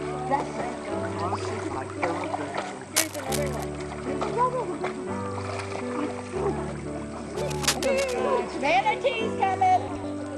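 At 1.70 to 1.76 s a brief garbled flutter marks frames out of order: two adjacent 26 ms blocks, consistent with one frame each, were decoded in swapped order, and no time is lost. Between 2.96 and 3.64 s, and again from 7.36 to 8.19 s, dense uneven scratching rides over the audio. The first burst is roughly as loud as the sound and the second a little quieter. This is cable scratch noise, likely from a worn cable or connector being moved, its contact resistance flickering. At 9.88 to 10.04 s a longer flutter returns as two 78 ms blocks, fitting runs of three frames, play with their halves exchanged.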